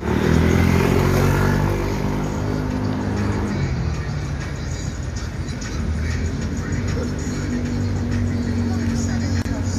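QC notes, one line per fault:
9.42–9.45 s: gap at a join of encoded pieces. A 34 ms gap opens with smeared edges, then the sound resumes. Encoder delay and end padding remained at the seam.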